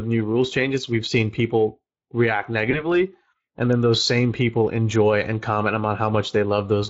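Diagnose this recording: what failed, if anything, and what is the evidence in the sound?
Codec stage: the Speex codec has left plainly audible damage across the whole speech clip. The voice has the grainy, hoarse texture of a CELP coder whose excitation is only approximated, which fits a Speex mode running at around 20 kbps. On a spectrogram the harmonics look smeared and roughened, with noisy filling between them instead of clean, separated partials. In the waveform the fine detail of each pitch period is simplified.

Network and codec stage: VoIP packet loss concealed by the speech codec appears from 2.71 to 2.86 s, right after "we've seen people react". The gap points to a single lost 20 ms frame. The decoder filled it by extrapolating from its last pitch and filter, and the disturbance spans about 150 ms. On a spectrogram this shows as a brief stretched sound that fades. The waveform shows the filled section shrinking in amplitude before normal speech detail returns.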